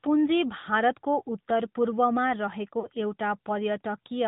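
Speech that sounds thin, boxed-in and somewhat buzzy throughout, with nothing above 4 kHz, is the mark of the AMR narrowband mobile codec; the plainly audible damage fits a mid-rate mode around 10 kbps. Brief warbling dips at 0.60–0.65 s and, longer, 2.80–2.89 s come from lost AMR speech frames, consistent with one and two dropped 20 ms frames concealed by the decoder.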